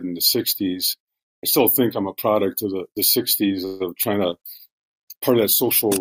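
Around 3.65 s the audio hangs for roughly 0.15 s, up to 3.82 s, with the last sound stretched out as a sort of held buzz. That's a call audio freeze, likely from packets getting stuck in transit until the jitter buffer ran dry. When they turn up, playback resumes right where it stopped, so nothing's lost, but everything after runs about 0.15 s late.

Just after, from 4.02 to 4.05 s, there's a quick smear or wobble, which is short concealed packet loss. About 20 ms of audio never made it to the decoder, and the receiver patched the hole by extending what came before and blending back into the real signal.

From 4.33 s to the end there's a call bitrate drop. The encoder gets squeezed from 96 to 23 kbps, so the coding turns coarser and the top end is cut from 20 kHz down to 12 kHz. It sounds rougher and duller, and it stays that way through the end.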